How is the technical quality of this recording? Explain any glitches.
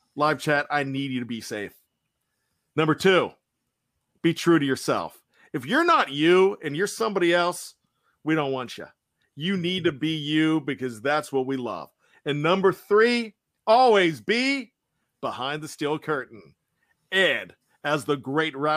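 No glitches turn up in this recording: the speech runs steady the whole way, with no dropouts, clicks or stutters anywhere.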